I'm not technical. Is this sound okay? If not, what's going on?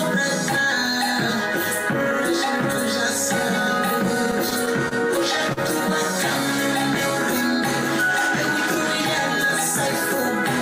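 No. Between 4.31 and 4.93 s the sound catches and drags in four quick hiccups, the longest about 26 ms. This is repeated stalls (stutter): the data kept arriving late, so the player kept running dry and held the last sound until more came.

Then at 5.53 to 5.59 s one sound is briefly held too long, with a slight buzz or dip. This is a short stall from a late packet: one piece of data came 37 ms late, and the player stretched the previous sound to cover the wait.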